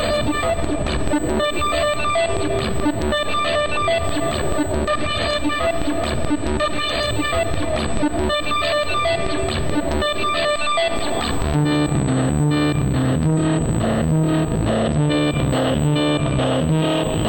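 USB whine runs throughout: a fixed 8 kHz tone about 20 dB below the signal, from the bus's 125-microsecond microframe current draw leaking through power or ground.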